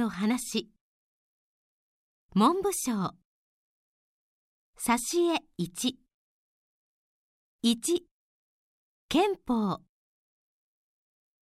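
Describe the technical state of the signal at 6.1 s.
At 6.1 s the signal is intact, with no audible dropout, click, distortion or other fault at that point.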